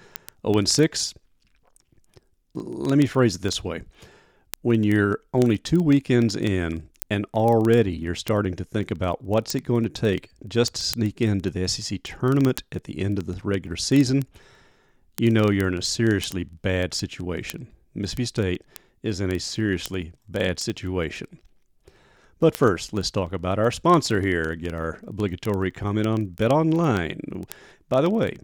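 A speech clip with a steady run of sharp, uneven ticks from 0.12 s to 28.4 s, about 25 per second, some hundreds in all. These are word clock ticks: the receiving device runs on its own clock, roughly 500 ppm off the sender's, so single samples are dropped or repeated.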